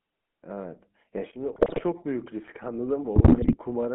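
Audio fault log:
Throughout: GSM full-rate codec. The speech has that buzzy, gravelly roughness from pulse-driven vocal-tract modelling, squeezed into roughly 200 Hz to 3.4 kHz, consistent with a 13 kbps coder.
1.56 to 1.83 s and 3.16 to 3.56 s: GSM bit errors. The speech breaks into squawks and gargling as corrupted filter, pitch and gain values distort frames in these two bursts.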